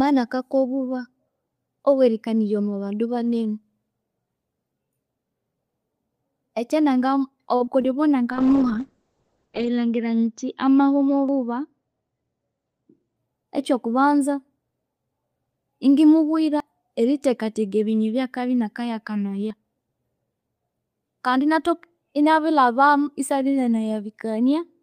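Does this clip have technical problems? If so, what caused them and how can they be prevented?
Yes. There are four kinds of fault in this speech clip.

Short stall from a late packet: from 7.55 to 7.62 s the sound hangs on one spot for about 48 ms, a held, faintly buzzy stretch, and then carries on with nothing skipped. A packet arrived late, the jitter buffer ran dry, and the receiver prolonged the last sound until the packet turned up, leaving the playout 48 ms later than before. A deeper adaptive jitter buffer on a steadier network path would prevent it.

Short concealed packet loss: right after the stall there are two brief smears, at 7.66 to 7.69 s and 7.81 to 7.98 s. In each, 20 ms of audio never arrived. The decoder extended the previous sound to cover the gap and then blended back into real audio, which is why this shows up as a quick wobble rather than silence. At the second spot the concealment also adds a small amount of extra time. 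Forward error correction or redundant packets would reduce these losses.

Call bitrate drop: from 8.33 to 13.22 s the speech turns rough and muffled, ending just before "ekyo kubanza". The bandwidth estimate fell, so the encoder went from 32 kbps to 7 kbps and the audio band narrowed from 20 kHz to 8 kHz. The worst quality lasts about 1.4 s. More headroom on the link and slower, smoother rate adaptation would prevent this.

Dropped buffer (overrun): there are abrupt jumps forward in the sound at 11.29 s, at 16.60 s just before "erithekatheka ebinywe byakabya", and at 19.51 s. The first two skip roughly 70 ms and the last about 20 ms. There's no silence at these points, just a direct splice. The likely cause is that the capture program didn't read its buffers before the hardware overwrote them. Larger capture buffers and higher priority for the audio thread would prevent this.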